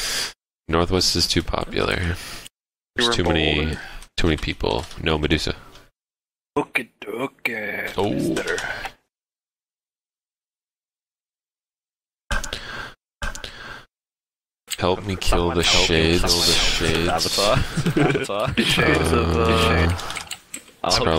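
From 13.21 s to 19.85 s a doubled audio track appears: a second, full-band copy of the sound runs about a second behind the original, a few decibels quieter. The likely cause is the same signal being captured again through a slower path, or two misaligned copies left in an edit. Unlike an echo or reverb, the copy never fades or takes on room colour. It repeats just once, and it cuts in and out abruptly at those times.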